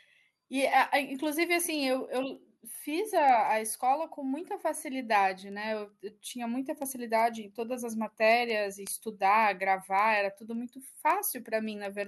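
From 0.12 s to 12.04 s the speech carries word clock ticks: sharp clicks of uneven strength recurring steadily about every fifth of a second, some seventy in all. The receiving device runs on its own clock, roughly 100 ppm off the sender's, so each time the two slip past each other a single sample is dropped or repeated. That metronomic spacing separates it from random dropout clicks or crackle, which arrive irregularly.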